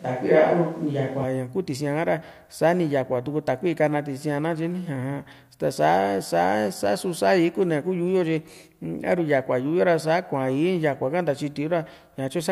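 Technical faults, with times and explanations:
0.00 to 1.24 s, switch to a distant microphone: the speech is already hollow and roomy when the clip opens, thinner in the bass, with the room's reflections blurring each syllable. The loudness stays about the same, and background noise sits roughly 40 dB below the speech. At 1.24 s the sound snaps to a close, full tone. The likely cause is the recording starting on a microphone further from the talker before cutting over to the close one.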